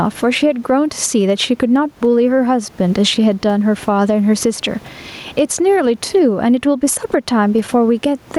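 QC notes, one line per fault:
Throughout, gain pumping: the gain swings by around 10 dB, with the room noise about 35 dB below the speech. Likely from input gain set far too high with a fast limiter pulling it down, squashing the dynamics.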